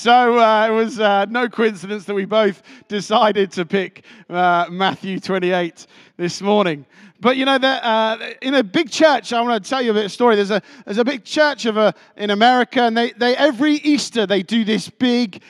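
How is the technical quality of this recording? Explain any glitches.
No technical glitches can be heard anywhere in the recording; the signal stays steady and continuous throughout.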